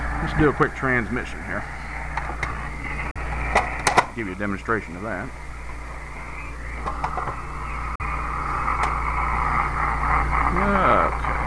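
A Bluetooth dropout, likely, cuts the audio at 3.11 to 3.17 s and again at 7.95 to 8.01 s. Each gap is a brief silence, which fits about two packets failing to reach the headphones in time. The sound then resumes further along, as if it had kept playing.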